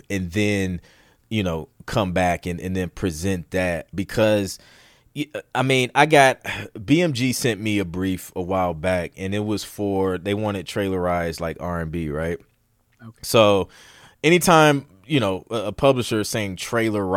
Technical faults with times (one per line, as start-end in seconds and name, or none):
4.23-6.35 drift correction step